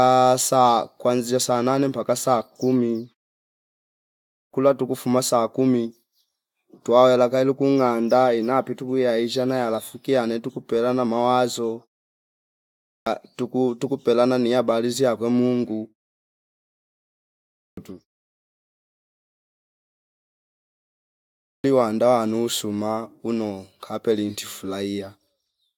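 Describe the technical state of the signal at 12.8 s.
At 12.8 s the audio shows a clipped start after a pause. After about 0.91 s of silence the output path needs to wake, so 12.70 to 13.07 s is swallowed. About 0.36 s is lost, and speech begins abruptly without its first sounds.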